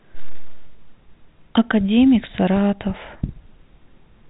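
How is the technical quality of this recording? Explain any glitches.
No glitches can be heard in the recording. The speech comes through the G.711 telephone coding path with the narrow band of a landline call, with nothing above about 3.8 kHz.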